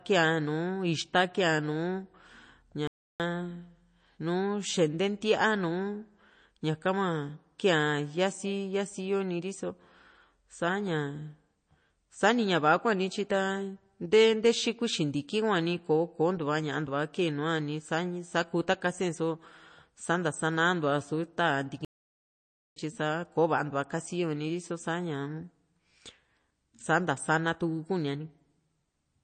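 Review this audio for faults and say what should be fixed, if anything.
The speech sits under a hard ceiling with nothing above a fixed treble cutoff, and the whole clip has a plainly audible watery, swirling texture, with s sounds turning chirpy and consonant onsets smeared. That points to MP3 compression as the likely cause, at a low bitrate that fits something around 32 kbps. The cutoff is fixed and the swirl tracks the signal, which distinguishes it from a low-pass filter or a resampling cutoff, neither of which makes things flicker. Encoding at a higher bitrate would prevent it.

The sound drops to silence mid-flow twice, from 2.87 to 3.20 s (about 0.32 s) and from 21.85 to 22.76 s (about 0.91 s), and then carries on. A playback stall is the likely cause: the player ran short of data or its thread was blocked, so output went silent until it recovered. A dropout in the recording would leave a gap at the same point on every play, and an edit would cut time out rather than insert silence. 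Larger playback buffers and a non-blocking audio thread would prevent it.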